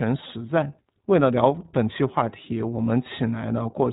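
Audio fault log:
throughout, iLBC codec: the speech is held to a narrowband channel, with nothing above about 4 kHz, so sibilants and consonant edges sound dull and boxy. Each short frame's excitation is coded on its own, without drawing on the previous frame, which leaves a plainly audible rough, slightly synthetic grain. The texture fits iLBC's 20 ms frame mode at around 15.2 kbps. Clarity holds, but the timbre is coarse.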